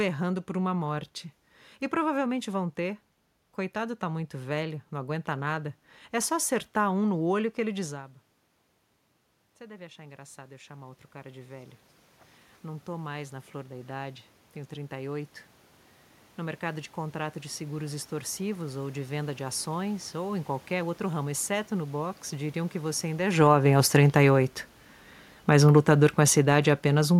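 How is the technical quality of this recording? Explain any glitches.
The recording has two level faults, both caused by automatic gain control reacting to changes in how loud the talker was at the microphone.

Automatic gain rising, from 9.58 to 20.42 s: after the talker moved at around 8 s, the input dropped by about 16 dB. The gain control responded by slowly raising its gain, by about 14 dB in total, over roughly eleven seconds. You hear the voice and the room noise swell together, climbing steadily rather than jumping. The background becomes more prominent as the level comes back up.

Automatic gain falling, from 22.96 to 27.15 s: after another change in the talker's position at around 23 s, the input became too loud and the gain control pulled its gain down by about 6 dB over roughly four seconds. The sound starts hot and then sinks gradually. The room noise fades with it, because the whole signal is turned down rather than just the voice.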